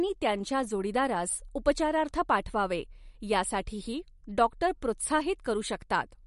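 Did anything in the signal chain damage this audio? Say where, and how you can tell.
Yes, at the codec stage: the speech is band-limited throughout, with nothing above 11.2 kHz, and the sibilants swirl and chirp metallically. This is likely MP3 compression at a low bitrate, around 48 kbps, cutting treble and toggling weak frequency lines between frames.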